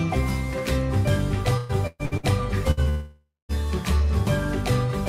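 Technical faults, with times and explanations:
1.57 to 2.26 s, repeated packet loss (robotic sound): across this stretch the audio breaks up four times, and about half of the span is patched rather than real. Each hole, the longest 124 ms, is filled by extending the preceding sound, giving a choppy texture with about 360 ms of material missing in total. On a spectrogram, short stretches of smeared, repeated harmonics alternate with normal detail. The waveform shows blocky, self-similar segments between the intact ones.
2.71 s to 2.80 s, burst of packet loss: a single hole of about 60 ms. The last sound before it is stretched out and turned down to fill the space, so there is a brief held buzz or fading hiss. The audio then jumps ahead, and that short piece is gone. On a spectrogram this shows as a frozen, horizontally streaked band that dims before normal content resumes. The waveform shows a short repeated pattern with a decaying envelope.
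2.89 to 3.52 s, long network dropout: for about 0.6 s the audio is replaced. First comes a continuation of the last sound that fades as a buzz or hiss, and then about 0.2 s of silence. The audio returns further on without the lost section. The likely cause is a stretch where no audio arrived at the receiver. On a spectrogram, streaked frozen energy fades into an empty band. The waveform tapers to a flat line before the signal reappears abruptly.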